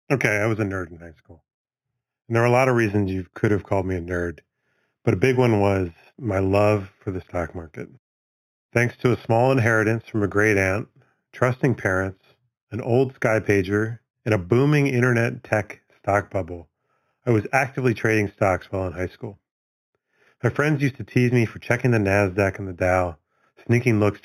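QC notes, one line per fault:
Throughout: imaging from linear upsampling. The speech was raised from an 8 kHz rate to 48 kHz by joining samples with straight lines, which filters poorly. The top of the original band is dulled, and a faint mirror copy of the spectrum, roughly 25 dB down, sits between 4 kHz and 8 kHz. That copy lends sibilants a thin metallic shimmer. A spectrogram shows the speech harmonics reflected upside down above 4 kHz. The waveform looks like slightly faceted straight segments.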